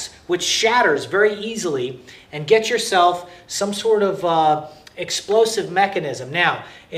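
Nothing in this audio stands out as a technical fault, so there's really nothing here to flag.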